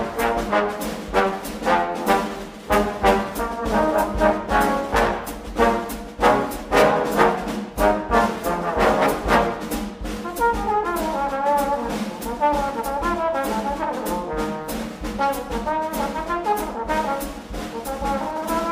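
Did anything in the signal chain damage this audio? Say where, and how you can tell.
No, nothing in the signal chain damaged this audio.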